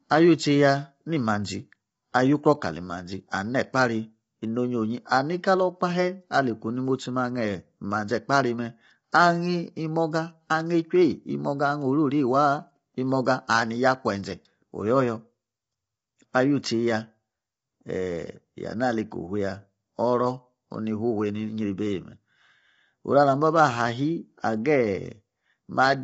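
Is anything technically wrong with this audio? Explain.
Yes, two faults are audible. Throughout, the speech sounds rough and grainy, with noise filling the gaps between harmonics and nothing above 7.7 kHz. This is likely low-delay AAC compression (AAC-ELD), whose short frames resolve harmonics poorly, and the plainly audible damage fits a bitrate near 24 kbps. A spectrogram shows smeared harmonics and a hard ceiling at 7.7 kHz.

At 9.12 s there is pre-echo. The codec spread quantisation noise across a whole block, so a short hiss of about 11 ms comes before a sharp attack, which sounds softened. On a waveform, low-level noise sits just ahead of the transient. A spectrogram shows a broadband smear there.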